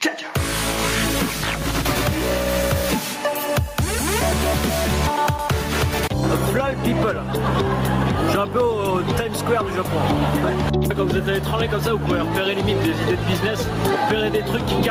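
Gain pumping runs throughout the clip: loud and soft parts are pulled closer in level, a swing of roughly 10 dB. The likely cause is input gain set far too high, with a fast limiter clamping down on peaks and squashing the dynamics.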